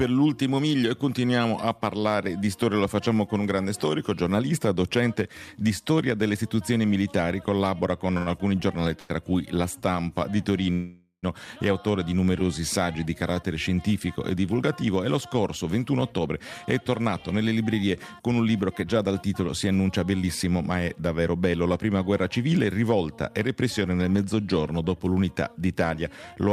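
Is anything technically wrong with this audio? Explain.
Yes. The audio has three kinds of late-packet fault.

A short stall from a late packet occurs at 8.17–8.30 s and again at 9.00–9.12 s. Each time a packet missed its slot, the jitter buffer emptied, and the receiver stretched the last sound by 91 ms until the data arrived. Nothing is lost, but the sound is held too long, with a buzz or dip.

A call audio freeze runs from 10.73 to 11.26 s. The sound stops advancing and 500 ms of filler replaces it: the last sound continues as a buzz or hiss that fades, ending in about 50 ms of silence. It then resumes where it stopped. The likely cause is packets held up in transit so the jitter buffer ran dry.

A jitter buffer speed-up spans 14.96–20.45 s. The buffer had built up excess delay, so the receiver repeatedly cut out short pitch-period pieces, roughly half a second in total. Playback runs at about 108% speed at unchanged pitch, which sounds hurried.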